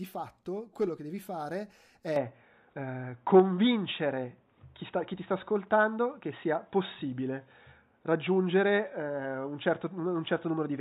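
Speech that turns dull and boxy at 2.16 s and stays that way to the end, with nothing above 3.8 kHz and a level shift of around 5 dB, likely from the input switching to a poorer device.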